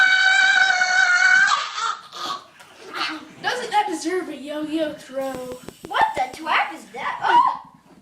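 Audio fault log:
0.0–2.0 s, adaptive stream starting at a low bitrate: the opening sounds dull and a bit smeary, with nothing above about 8.2 kHz and codec artefacts more obvious than later. That fits a player grabbing a low-bitrate rendition, something like Opus at 12 kbit/s, so playback starts fast, then switching once it has measured the connection. At 2.0 s the quality jumps up without any gap, which points to a higher rung around 64 kbit/s.
5.35–6.35 s, train of clicks: a steady ticking runs on top of the audio for about a second, roughly seven near-identical pops at a regular 6.06 per second, sitting about 10 dB above the signal. The even spacing and matching shapes suggest something repeatedly injecting the same pulse, likely interference from nearby gear or a faulty connection or power supply.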